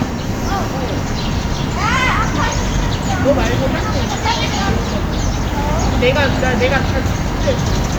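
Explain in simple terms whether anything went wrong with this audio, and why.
Nothing stood out as wrong when listening to this audio.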